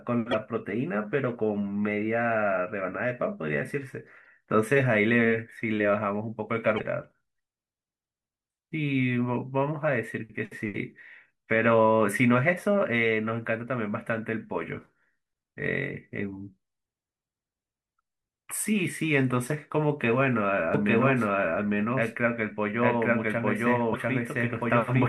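A speech recording with damaged data in a compressed stream at 0.31–0.35 s, 4.24–4.26 s, 6.76–6.80 s and 23.92–23.96 s. Each is a short chirp or blip lasting a few tens of milliseconds, where the decoder misreads corrupted frames, loses sync and hunts for the next valid header. On a spectrogram each shows as a narrow vertical smear of broadband or oddly tonal energy that breaks the speech harmonics. The waveform has a glitch or discontinuity at each point. From 20.74 s to the end there is a doubled audio track. A second full-band copy of the speech runs about a second behind the original at roughly the same level, with no reverb tail or room colouring, and it starts abruptly. The likely cause is the signal being captured twice, once through a slower path. A spectrogram shows the same syllable patterns repeated about one second later, stacked over the original. The waveform thickens suddenly at 20.74 s, where the delayed copy comes in.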